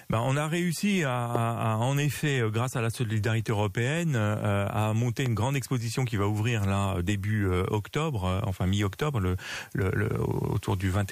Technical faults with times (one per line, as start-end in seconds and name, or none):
1.35-1.38 loud pop
5.26-5.28 loud pop